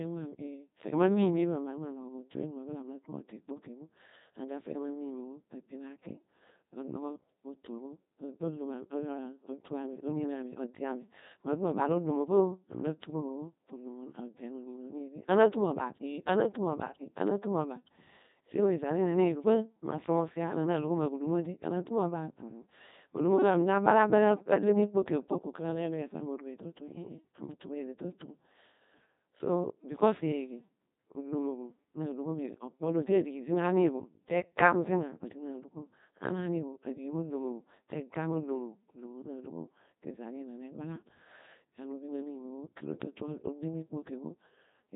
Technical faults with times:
0.00-44.96 Codec 2 vocoder

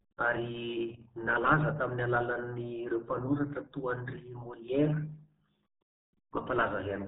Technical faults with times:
0.00-7.07 RealAudio 14.4 codec

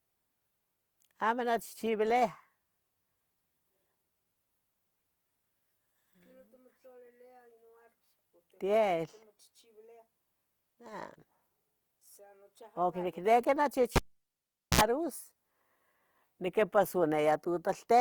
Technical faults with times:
0.00-18.00 Opus compression
13.96-14.81 cable pulled and plugged in

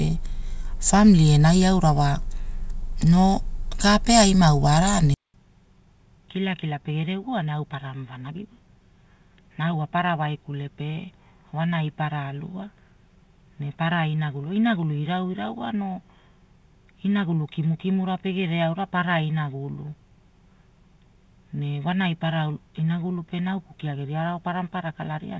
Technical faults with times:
5.14-25.39 input switched to a poorer device

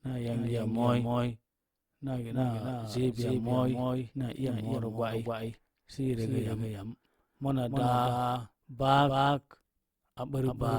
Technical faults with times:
0.00-10.79 doubled audio track

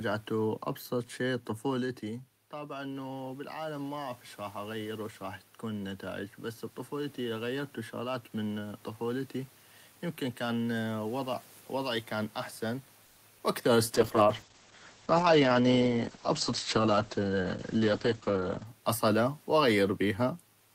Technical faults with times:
2.01-6.06 automatic gain rising
13.05-13.20 call audio freeze
13.38-13.41 short concealed packet loss
13.96-18.73 call bitrate drop
15.32-16.94 jitter buffer speed-up

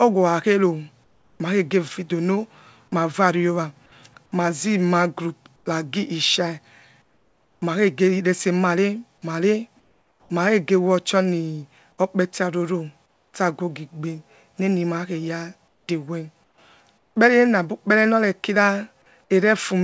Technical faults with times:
1.04-1.40 comfort noise in place of the background
5.56-5.66 comfort noise in place of the background
7.02-7.62 comfort noise in place of the background
9.80-10.30 comfort noise in place of the background
13.06-13.34 comfort noise in place of the background
15.68-15.88 comfort noise in place of the background
16.44-16.58 comfort noise in place of the background
16.98-17.16 comfort noise in place of the background

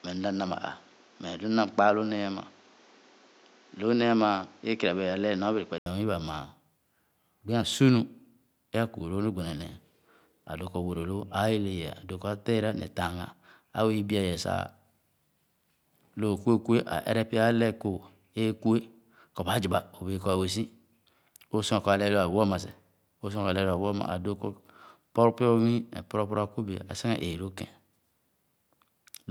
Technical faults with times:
0.00-5.86 input switched to a poorer device

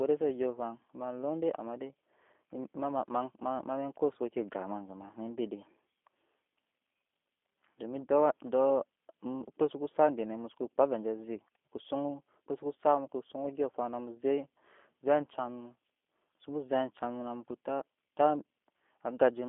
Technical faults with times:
0.00-19.49 G.729 codec

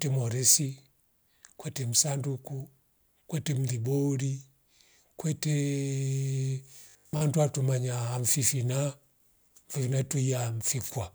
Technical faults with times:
6.79-7.21 robotic sound from repeated short buffers

